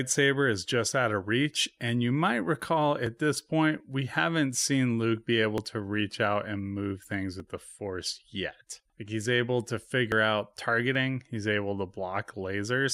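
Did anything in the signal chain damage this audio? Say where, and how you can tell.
Yes. Audio is missing between chunks at 3.06, 7.04 and 10.95 s, about every 4 s. Each is a tiny skip of a few milliseconds, joined with no silence. The regular spacing points to the recording or processing stage, likely losing a sliver each time one chunk closes and the next opens.

There are also dropped buffers (overruns) at 5.58, 7.40 and 10.12 s. Each is a jump forward with no gap. The first two lose about 20 ms. The one at 10.12 s loses about 70 ms. This is likely the driver or buffer stage, where the program collected samples too late and the hardware overwrote them.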